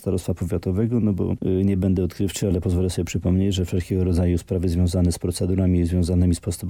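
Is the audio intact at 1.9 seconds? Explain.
Yes, the audio at 1.9 seconds is intact, with no dropout, click, distortion or other fault at that moment.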